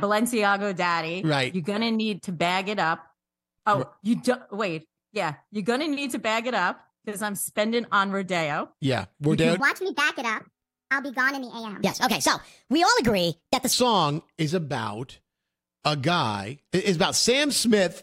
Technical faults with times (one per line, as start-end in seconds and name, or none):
9.60-13.72 section at the wrong speed